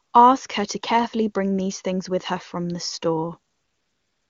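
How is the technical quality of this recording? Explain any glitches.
The recording carries wideband phone-call audio whose clarity points to a high AMR-WB rate, possibly the top 23.85 kbit/s mode. The glitch is AMR comfort noise, from 0.03 to 0.13 s and from 3.51 s to the end. The phone judged those stretches silent and stopped sending speech frames, so the receiver substituted synthetic noise built from a coarse level and spectrum estimate. The real background gives way to a smooth, steady hiss that switches in and out.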